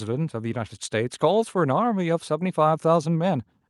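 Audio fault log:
No faults heard.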